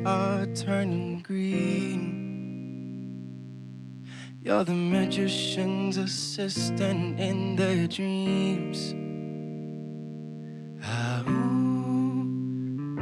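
A thin, steady DECT cordless phone buzz sits well below the sound for the whole clip, from radio bursts every 10 ms; a spectrogram shows stacked horizontal lines at 100 Hz and its harmonics.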